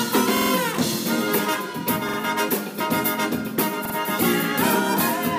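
At 0.37–0.51 s, 2.09–2.18 s and 3.85–3.95 s, a repeated buffer stutters: a 46 ms chunk replays, fitting a 2048-sample buffer, showing identical waveform blocks with hard seams.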